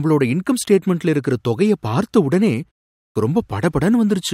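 At 2.96 s, just after "இருக்குற தொகையை பார்த்த உடனே" and a pause of about 0.33 s, the next stretch of speech bursts in abruptly from silence with its opening missing, and normal sound resumes only at 3.16 s. This is a clipped start after a pause: during the brief silence the output device dropped into a sleep state, and it needed about 196 ms to wake and lock again, swallowing the first sounds of the word.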